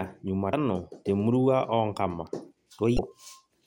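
A speech clip with two brief blips, at 0.50 to 0.53 s, just before "te murua oonkama", and at 2.95 to 2.99 s. Both come from damaged data in a compressed stream: the decoder hits corrupted frames, loses sync, and resumes at the next valid frame header.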